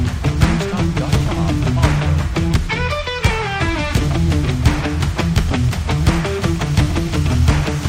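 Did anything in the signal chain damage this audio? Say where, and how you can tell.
Yes: imaging from linear upsampling throughout, at sample-rate conversion. Metallic shimmer from mirror images between about 11 and 22 kHz, roughly 35 dB down, reveals straight-line interpolation.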